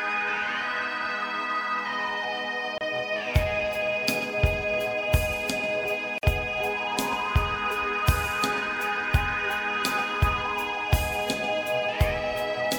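The audio breaks twice with a gap at a join of encoded pieces. Sound drops out from 2.78 to 2.81 s, about 29 ms. It drops again from 6.18 to 6.23 s, about 49 ms. Each gap has smeared edges, and the sound resumes where it stopped. The pieces were encoded separately and joined without trimming. Each encoder's start-up delay and last-frame padding remain in, as silence.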